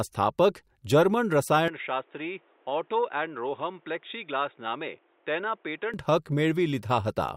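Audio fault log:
1.68–5.94 s, input switched to a poorer device: the speech abruptly loses its top end, with nothing above 3.8 kHz, and drops roughly 10 dB in level, with no gap at either transition. A new noise floor appears, sitting about 35 dB below the speech. The band-limited, duller, quieter sound with its own background noise points to the recording likely moving to a lower-grade microphone or a headset call profile, then returning to the original input at 5.94 s.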